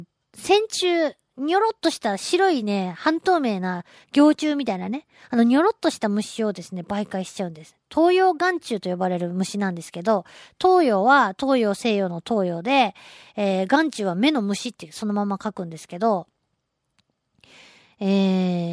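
Nothing goes wrong anywhere in this recording of speech, so there's really nothing technical here to flag.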